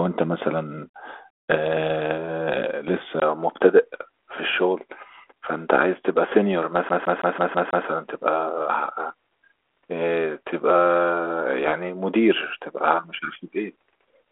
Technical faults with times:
3.20-14.32 input switched to a poorer device
6.89-7.87 CD stuck on one turn

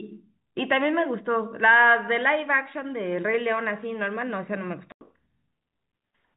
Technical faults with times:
4.92-5.01 packet loss filled with silence

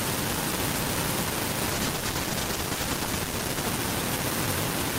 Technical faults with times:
1.75-3.73 call bitrate drop

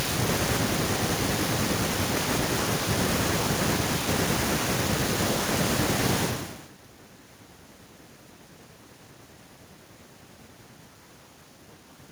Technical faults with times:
none

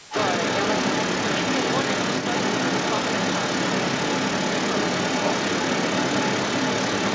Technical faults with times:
0.00-7.15 other side's voice leaking through
0.03-0.12 speech suppressed in double talk

